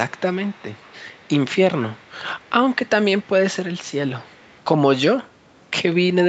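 From 0.08 to 1.29 s, then 1.8 to 2.12, 2.4 to 2.5, 2.71 to 2.89, 3.21 to 3.3 and 4.2 to 4.61 s, a faint delayed copy of the speech trails about 177 ms behind, roughly 20 to 35 dB down. This is likely an echo leak, with a loudspeaker echo canceller letting residual pickup back through.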